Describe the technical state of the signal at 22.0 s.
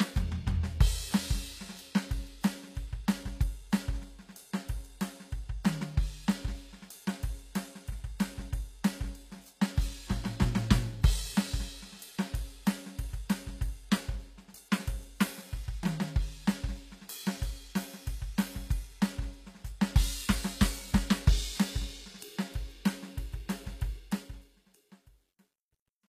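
At 22.0 s the music carries the artefacts of low-rate HE-AAC compression, present throughout the clip, with damage plainly audible. The spectrum stops at about 14.9 kHz, and the upper band sounds synthesised rather than recorded: the top octaves have been rebuilt from copied lower bands under a coarse envelope, so their harmonics fail to align with the real content below. Cymbal and sibilant energy turns gritty and metallic, likely from a bitrate near 24 kbps.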